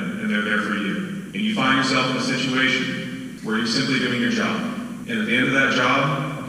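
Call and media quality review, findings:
No findings: the call and media quality review turned up no faults in this clip.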